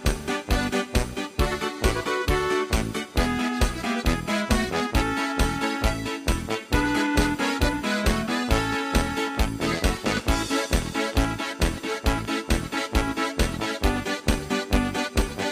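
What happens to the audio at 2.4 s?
Nothing goes wrong at 2.4 s; the audio plays through that moment intact, with no dropout, click, distortion or other fault to be heard.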